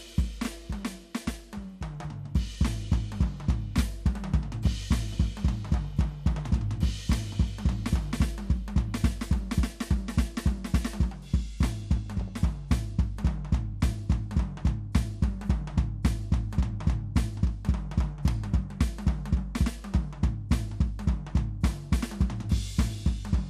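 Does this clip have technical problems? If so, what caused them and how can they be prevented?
Yes. Throughout, the music sounds dull and granular, with upper frequencies flickering in and out, likely from MP2 compression at a low bitrate, around 80 kbps. A spectrogram shows blocky high bands switching on and off. Encoding at a higher bitrate prevents it.

DAB burbling occurs at 4.48–4.85 s, at 6.38 s, and at 12.21–12.30 s: bit errors, at a fraction of a percent, corrupt sub-band samples, causing short blips of noise in single sub-bands. A spectrogram shows isolated band-shaped bursts. Stronger reception or a better antenna prevents it.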